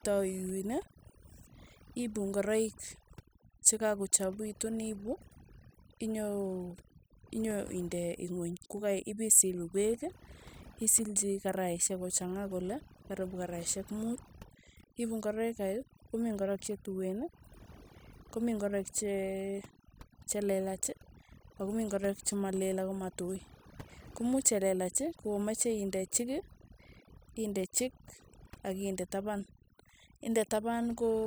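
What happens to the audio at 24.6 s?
At 24.6 s the speech carries the overdone noise removal present throughout: bands near the noise estimate are cut away, leaving twinkling specks in near-silence.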